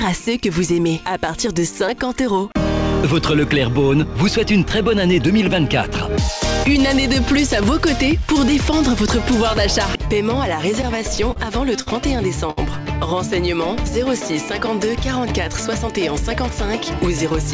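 From 10.82 to 11.38 s there is repeated stalling (stutter): the jitter buffer ran dry four times as packets arrived late, and the receiver extended the preceding sound to cover about 59 ms in total, with the longest gap 31 ms. Nothing is lost, but roughly a tenth of that span is filler, so the audio drags and judders.

Two short stalls from late packets follow, at 11.82 to 11.88 s and 12.50 to 12.59 s. In each, a packet missed its playout time and the last sound was held, for 46 ms and then 66 ms, before playback resumed from the same point. Each is heard as a briefly sustained sound with a faint buzz or dip.

From 15.69 to 16.51 s the jitter buffer speeds up to reduce excess delay, trimming short pitch-period segments in succession, about 40 ms altogether. Playback runs at 104% speed without a pitch change. Throughout, the audio is band-limited with nothing above 8 kHz, which fits a wideband call codec.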